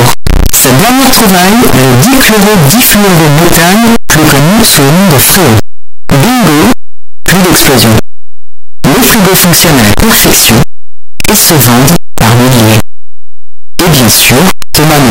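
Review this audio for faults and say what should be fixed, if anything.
A signed and unsigned mix-up is likely at work across the whole speech clip: the 8-bit samples appear to be interpreted with the wrong sign convention, so the top bit of every sample is flipped. Every time the waveform crosses zero, the value leaps from one end of the range to the other. From start to finish the result is loud, harsh distortion, with soft syllables blasting as hard as the strongest sounds. The 8-bit depth itself is not the issue. To prevent this, declare the sample format explicitly at every read and write, treating 8-bit data as unsigned with a 128 offset where that convention applies, and convert rather than reinterpret when moving between signed and unsigned.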